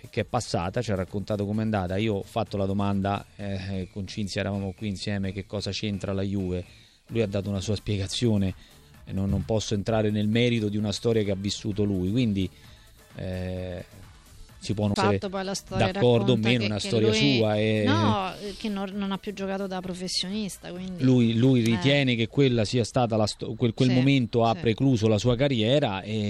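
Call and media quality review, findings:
Bluetooth SBC bit pool drop, 2.80–3.90 s, 14.07–16.14 s, 19.90–23.26 s. Treble dulls and gritty noise rises, then clears. Probable component: A2DP link under congestion. Sender cut the SBC allocation, consistent with bit pool 31 falling to 16, around 110 kbps. Upper sub-bands starved, the rest coarsely quantised. Spectrogram: flat ceiling across the HF region for each span, grainy speckle below it. Waveform: little visible change.

CD skip, 14.94 s, inside the second bit pool span. Tick, then a sudden jump to a different point in the material. Probable component: disc transport, laser tracking jumping to another turn of the spiral after a knock or a disc flaw. Player mutes briefly, on the order of 20 ms, then resumes elsewhere. Waveform: near-flat gap, then a discontinuity. Spectrogram: thin vertical click line.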